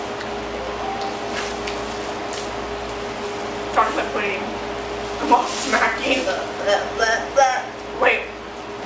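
No technical faults can be heard, and the audio carries the ordinary character of a wideband call path, with nothing above 8 kHz, which fits a G.722 codec.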